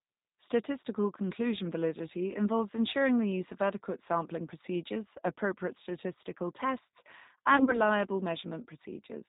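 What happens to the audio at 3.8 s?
At 3.8 s, as across the whole clip, the speech runs through a G.729 codec, which fits an 8 kbit/s G.729A stream. It rebuilds the voice from a vocal-tract filter, pitch predictor and sparse pulses, cutting everything above 4 kHz, so the speech sounds muffled, rough and plainly synthetic.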